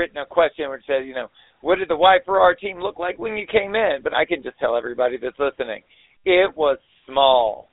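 GSM full-rate codec damage runs throughout: pulse-driven vocal-tract coding, consistent with 13 kbps, leaves plainly gravelly, buzzy speech in a 300 Hz to 3.7 kHz band, silent above 3.8 kHz.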